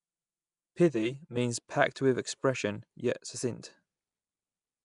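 A speech clip with two technical faults. Throughout, the sound has plainly audible codec damage, likely from Nellymoser compression. This Flash-era codec codes short blocks with a fixed, small bit budget. Quiet bands get no real coding and are replaced by noise. That gives a rough, hissy halo and a smeared, underwater quality. Nothing remains above 10.6 kHz. The damage fits a bitrate near 44 kbps. From 0.00 to 1.37 s there is also channel delay (comb filtering). One channel arrives about 5 ms late, and the two are summed to mono. Content common to both cancels at evenly spaced frequencies. The first notch falls around 100 Hz, with the others repeating above it. For that stretch the speech sounds hollow and phasey.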